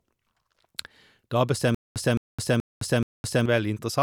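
Stutter with silent gaps from 1.75 to 3.46 s in this speech clip: a 215 ms fragment repeats four times, each followed by about 212 ms of digital silence, likely from a stalled stream replaying its last buffer.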